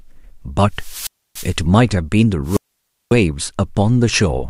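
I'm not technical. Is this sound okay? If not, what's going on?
No. Wireless microphone squelch dropout at 0.72–1.61 s and 2.44–3.15 s: the radio signal weakens, the receiver mutes for about 0.29 s, then 0.55 s, and speech returns.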